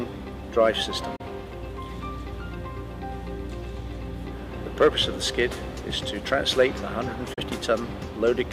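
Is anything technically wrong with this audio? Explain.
Yes, there are two brief digital broadcast dropouts, at 1.16 s and 7.34 s. Each time the receiver hits a bad stretch of signal, fades out over about 8 ms, and mutes. About 32 ms of audio is lost, which fits a single failed frame. The sound then resumes later in the programme. Unlike a hard edit or buffer glitch, these holes fade rather than click, and nothing repeats or stutters.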